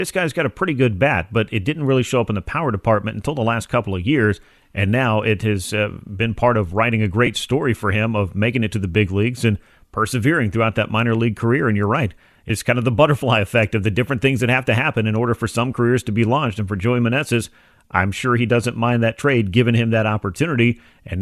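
At 7.26 s the speech has a very brief dropout from lost LE Audio frames. A gap of about 7.5 ms points to a single LC3 frame failing to arrive over the Bluetooth link. The decoder filled it by repeating the previous frame's spectrum with randomised phase signs. This produces a short, grainy smear rather than a clean silence, too brief to fade. The LC3 coding, likely around 64 kbps, adds only a faint grainy edge.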